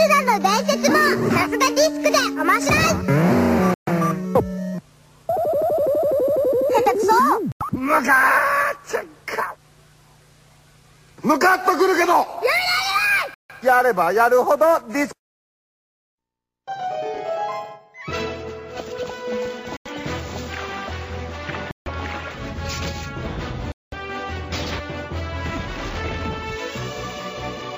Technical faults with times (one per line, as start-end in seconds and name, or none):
3.74-3.88 Bluetooth stall
7.52-7.62 Bluetooth stall
13.34-13.51 Bluetooth stall
19.77-19.87 Bluetooth stall
21.71-21.88 Bluetooth stall
23.72-23.94 Bluetooth stall